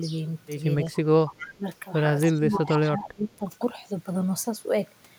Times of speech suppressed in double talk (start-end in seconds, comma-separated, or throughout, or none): 1.13-1.67, 2.30-3.47